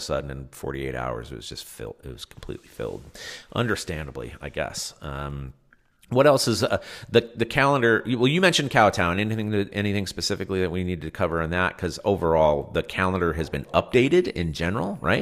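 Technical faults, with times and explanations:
13.89–15.22 s, switching supply whistle: right after "the calendar has been", a faint high whistle appears near 10 kHz, wandering between about 9.7 and 10.3 kHz, roughly 40 dB under the speech. That's a switching power supply running in an audible burst mode or beating with another one, its pitch shifting as the load changes.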